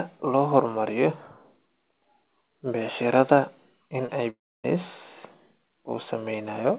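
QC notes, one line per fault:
4.06–4.10 s, short concealed packet loss: just after "becsharada in", about 20 ms of audio never arrived in time. The receiver bridged the gap by extending the preceding sound and blending back, so it comes through as a brief smear or wobble.
4.30–4.66 s, long network dropout: just after "becsharada in ay", about 340 ms of audio goes missing, likely a network stall. The last sound is stretched into a fading buzz or hiss, then roughly 280 ms of near-silence follows before the audio resumes without the lost part.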